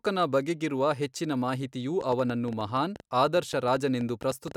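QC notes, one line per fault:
2.01 to 4.52 s, train of clicks: right after "ಬಗೆಗಿರುವ ಹೆಚ್ಚಿನ ಮಾಹಿತಿಯು" a run of around twenty near-identical ticks kicks in, about 8 per second but at an uneven pace, and keeps going to almost the end. They sit roughly 5 dB above the speech, so they pop out clearly, gaps included. Same-shaped pulses repeating like that point to something injecting them, likely interference from nearby gear or a faulty connection or power supply.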